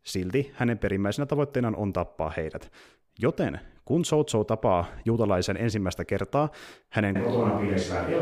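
A switch to a distant microphone comes at 7.16 s, right after "juutalaisen ensimmäistä kertaa hänen", and lasts to the end. The speech turns suddenly roomy and hollow with thinner bass at much the same level, room noise sitting around 30 dB below it, likely because the close microphone dropped out.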